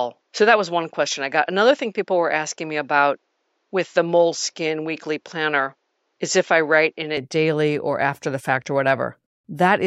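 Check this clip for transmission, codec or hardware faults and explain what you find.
One fault is present. From the start to 7.17 s, the speech is narrowed and duller, then opens up again. This points to an input switched to a poorer device. The system likely captured the first part through a lower-grade microphone or a headset call profile before changing inputs. That device passes nothing above 7.6 kHz. It carries its own noise floor, far below the speech. The level stays about the same across the change, and there is no gap at the switch.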